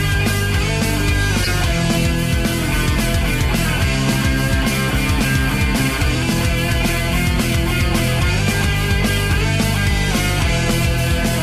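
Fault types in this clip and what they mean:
Corrupt frame decoded: around 1.44 to 1.48 s a single damaged compressed frame gets played as if it were intact, so its garbled gains and codes throw energy into the wrong frequencies. You hear it as a short, loud glitch peaking near about -5 dBFS, lasting roughly 40 ms.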